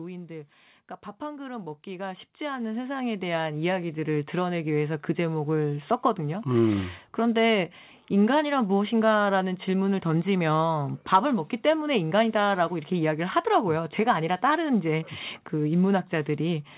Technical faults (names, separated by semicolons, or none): automatic gain rising